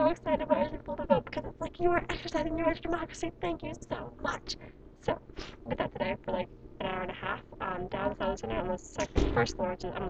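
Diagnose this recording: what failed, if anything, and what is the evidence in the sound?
Overlap-add ripple in frame-based processing, present throughout. Level dips by about 60 dB around 300 times a second, a metallic buzz with extra tones around each note. Frame windows don't sum to constant gain.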